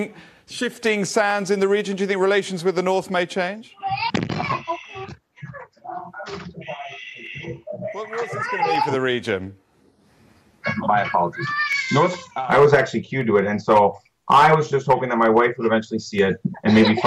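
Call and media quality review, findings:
Clock drift buffer slips, likely from two devices on independent clocks mismatched on the order of 100 ppm. Buffer slowly fills or drains, then drops or repeats a handful of samples. Heard as a regular click about every 1.49 s, roughly ten times, from 1.31 s to 16.19 s.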